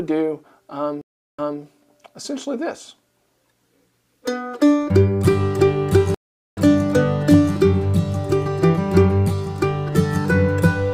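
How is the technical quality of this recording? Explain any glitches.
The recording has two stream reconnects, at 1.01 to 1.60 s and at 6.14 to 6.60 s. Each time the connection broke, playback went silent, and the player reconnected and started a new decoder partway through the stream, so the sound fades back in rather than snapping on. The first gap lasts about 0.37 s and resumes 220 ms earlier, repeating a short stretch. The second lasts about 0.43 s and resumes roughly 0.4 s later, skipping material. That jump in position is what separates a reconnect from a plain dropout, which picks up where it left off.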